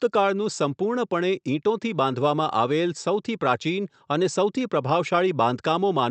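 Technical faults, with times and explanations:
No technical faults can be heard in this speech clip. It has passed through a WebRTC call path with normal Opus coding, and its top end stops at about 8 kHz, as expected for that path.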